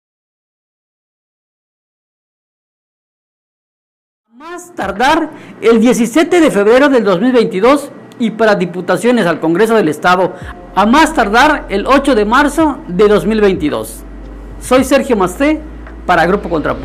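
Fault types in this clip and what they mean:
Nothing to flag here: the level eases up gently from around 4 s and settles by about 5.53 s, the way an editor would bring it in, with no click or hard edge.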